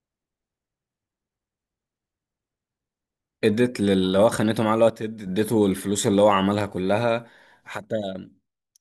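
At 4.90 s the speech abruptly drops by about 6 dB and stays low until 5.27 s, and the same step returns at 7.77 s and lasts to the end at 8.80 s. This is likely one channel dropping out: with one stereo side gone, the mono sum keeps only half of the shared signal. On a waveform the envelope shrinks suddenly to about half its height, and a spectrogram shows every band dimming together with sharp vertical edges at each boundary.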